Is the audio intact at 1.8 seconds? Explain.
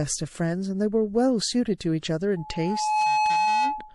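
No. From 1.78 to 1.80 s there is pre-echo: a hiss in the 27 ms before a sharp speech onset, which itself sounds softened. The codec spread its quantisation noise, sized for the loud attack, across the whole transform block, including the quiet moment ahead of it. That fits a long block of about 48 ms with no switch to short blocks. On a spectrogram, a broadband smear about 20 dB above the background appears just left of the onset. On the waveform, low-level fuzz precedes the transient.

Around that moment the whole passage also carries plainly audible MP3 compression, likely at a low rate around 48 kbps. The sound is watery and swirly, with chirpy, metallic sibilants, because weak frequency lines switch on and off from frame to frame. A spectrogram would show flickering, patchy energy rather than smooth texture.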